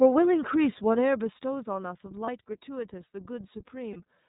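A short speech recording carries the iLBC codec throughout, with plainly audible coding damage. The band stops at 4 kHz, so everything above is missing and the voice sounds narrow. Each frame's excitation is coded on its own, leaving a slightly rough, synthetic grain on the speech. The frame structure suggests iLBC's 30 ms mode, which fits its 13.33 kbps setting. Two lost iLBC frames interrupt it, at 2.25 to 2.29 s and at 3.92 to 3.97 s, each a single 30 ms gap. In both, the decoder fills the hole by repeating the last pitch cycle blended with noise, heard as a brief held, faintly buzzy vowel. Because iLBC frames do not depend on earlier ones, the voice snaps back to normal immediately after each gap.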